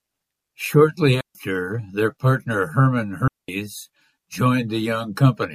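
At 1.21 s the speech drops into a clean hole of near silence lasting about 143 ms, ending at 1.35 s, with no noise burst on either side. This is a digital wireless dropout: the link lost too much data and the receiver muted briefly behind a very short fade.

At 1.73 s a brief glitch cuts in, peaking around -25 dBFS. This is a corrupt frame decoded: flipped bits in what sounds like a single compressed frame were played anyway, scattering energy to wrong frequencies for that frame's length.

From 3.28 to 3.49 s a second digital wireless dropout mutes the speech for about 209 ms, again as silence with no surrounding noise.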